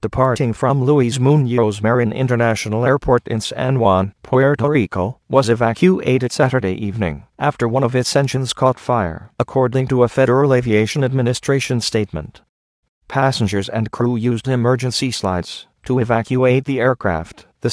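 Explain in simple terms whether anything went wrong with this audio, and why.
Nothing went wrong here.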